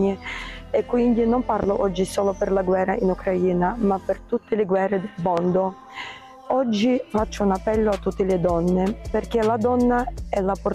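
A voltage spike, likely a switching transient, adds a loud pop at 1.63–1.66 s and another at 5.37–5.41 s, peaking about 10 and 15 dB above the sound.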